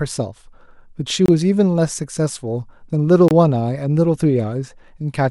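At 1.26 to 1.28 s and again at 3.28 to 3.31 s the speech drops out for about 25 ms, a gap between chunks. The audio arrives in 2-second blocks, and each join leaves a short stretch of silence that displaces the following sound without losing any of it. Each gap is heard as a brief, hard-edged hole. On the waveform it appears as a flat line with abrupt edges, and on the spectrogram as a narrow blank vertical stripe across all frequencies.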